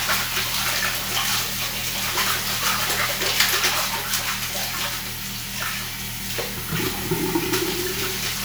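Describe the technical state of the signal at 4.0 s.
At 4.0 s the signal is intact, with no audible fault at that moment.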